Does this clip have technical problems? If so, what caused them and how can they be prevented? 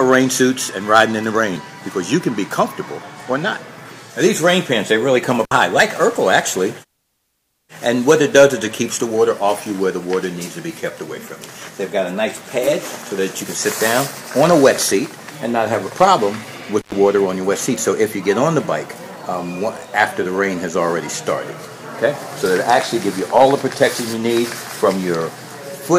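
Yes. An intermittent contact, a loose cable or plug briefly breaking the connection, opens the signal path twice: at 5.45–5.52 s for 59 ms and at 16.80–16.94 s for 105 ms. The sound cuts out, crackling at each edge, with faint hiss between. Seating connectors firmly and replacing worn cables prevents this.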